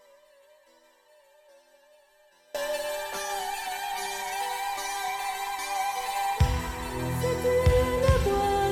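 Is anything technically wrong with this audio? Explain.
Yes. From the very start to 2.55 s there is an audio dropout to a faint residue, already under way when the clip begins. The likely cause is the wanted signal being lost upstream while the path after the break stayed live. Only a faint leak of the sound gets through, roughly 30 dB below its normal level, and at 2.55 s the full signal cuts back in abruptly rather than rising like a fade.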